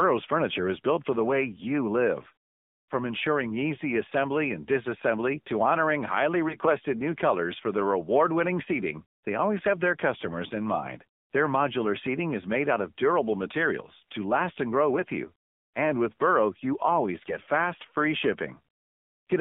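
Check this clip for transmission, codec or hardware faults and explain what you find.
Two faults stand out: narrowband mobile coding throughout, and three short bursts of corrupted frames.

AMR narrowband mobile codec, whole clip: the band runs only from 200 Hz to 3.6 kHz, and the low-rate vocal-tract model, which fits a mode around 7.4 kbps, leaves the speech buzzy and synthetic.

AMR bit errors, at 6.48–6.69 s, 14.95–15.04 s and 17.18–17.46 s: a few percent of the weakly protected bits flipped, misplacing the excitation pulses, so pitch and level hold but the speech turns hoarse and gargly.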